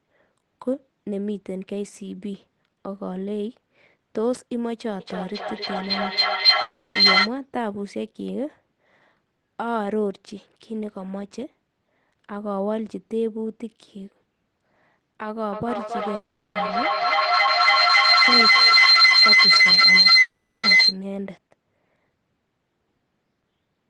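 From 5.0 to 7.34 s there's a feedback howl: the room loop keeps gaining, so it locks onto a ring around 4 kHz, pulsing roughly every 300 ms and peaking about 11 dB over the speech. It comes back worse from 15.53 to 20.99 s, at about 13 dB above the speech.

Inside those stretches there are gaps that are likely a long network dropout. At 6.61 to 6.97 s, the receiver smears the last sound into a fading buzz for 340 ms, and that part of the audio is gone. At 16.15 to 16.57 s and 20.21 to 20.65 s, the buzz decays into about a fifth of a second of silence before the audio picks up again further along.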